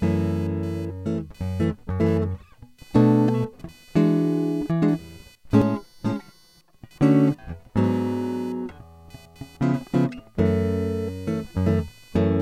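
Throughout the music, processor and graphics load disturb the audio circuit's shared ground, producing computer activity noise: a buzzy chirping around 500 Hz, roughly 30 dB below the music. From 5.62 to 6.73 s, one channel runs around 5 ms late and the two are summed to mono. This channel delay causes comb filtering, with notches starting near 100 Hz that leave the music hollow and phasey.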